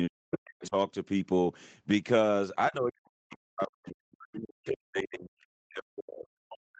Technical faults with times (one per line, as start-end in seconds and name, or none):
0.09-0.75 speech suppressed in double talk
0.31-0.69 other side's voice leaking through
2.70-6.79 speech suppressed in double talk